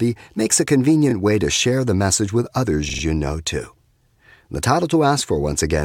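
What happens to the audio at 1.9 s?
Nothing goes wrong at 1.9 s; the speech carries on intact through that moment, with no dropout, click or distortion to be heard.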